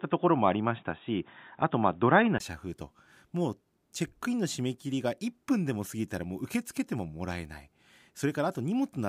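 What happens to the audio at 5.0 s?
Nothing goes wrong at 5.0 s: the speech runs on intact through that moment, with no dropout, click, distortion or other fault to be heard.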